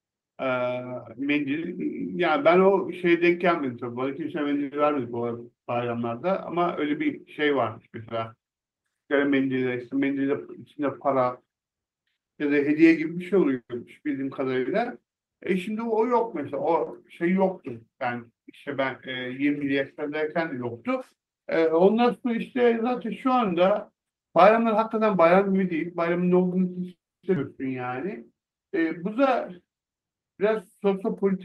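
A call audio freeze occurs at 13.55 to 13.71 s, most likely because packets were held up and the jitter buffer ran dry. The last sound is carried on as a fading buzz and ends in about 60 ms of silence. The speech then resumes exactly where it stopped, so nothing is lost, but 140 ms of delay has been inserted.

A jitter buffer speed-up runs from 15.79 to 16.71 s. The receiver trims single pitch periods again and again to shed surplus buffered audio, removing about 40 ms. Speech plays at 104% speed with unchanged pitch, a barely hurried delivery.

A short stall from a late packet follows at 16.84 to 16.89 s. With the expected packet absent, the last sound is stretched by 30 ms until it arrives, producing a briefly held sound with a faint buzz and no missing speech.

A second jitter buffer speed-up, at 24.63 to 26.41 s, is stronger. About 150 ms is cut in small pitch-period pieces, pushing playback to 108% at the same pitch, so the speech sounds noticeably rushed.

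Another call audio freeze spans 26.91 to 27.25 s. The held sound fades quickly into about 270 ms of silence, adding 320 ms of delay before speech picks up unbroken.

A skip ahead comes right after, at 27.35 to 27.38 s. Since later audio was already queued, roughly 200 ms of speech is discarded and the two sides are butted together with only a 10 ms fill, so playback lurches forward.

A jitter buffer slow-down at 27.81 to 28.35 s rebuilds the reserve by repeating pitch periods, adding 41 ms. Speech runs at 94% speed with pitch intact and sounds slightly drawn out.

Throughout, the Opus call path limits the audio to 12 kHz, which fits a modest bitrate around 32 kbps.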